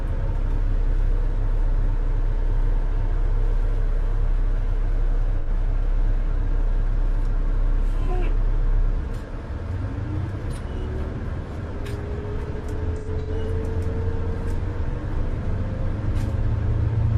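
AAC frame loss with concealment hits the audio at 5.38 to 5.49 s, an 85 ms smeared, noisy patch, and again from 12.98 to 13.51 s, where 256 ms of scattered dropouts, the longest around a tenth of a second, blur the sound as the decoder rebuilds each gap from the last good spectrum.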